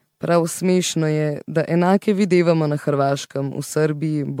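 Likely repeated MP3 re-encoding, about seven passes consistent with 96 kbit/s, gives this speech generation loss throughout: swirly, hollow tone, blurred attacks, nothing above 19.9 kHz.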